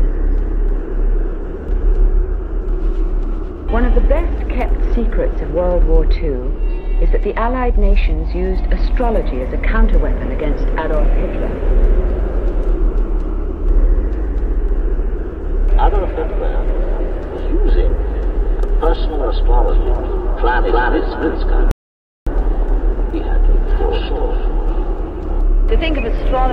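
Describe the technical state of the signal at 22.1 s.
At 22.1 s the signal sits inside an audio dropout to silence running from 21.71 to 22.27 s. The input feeding the recorder was likely lost for about 0.55 s, whether through a disconnected device, a failed link or a stray mute, while recording carried on and wrote silence in its place. The sound cuts out abruptly and comes back in mid-flow, with a dead gap and no room tone between, and whatever occurred during that half second is gone.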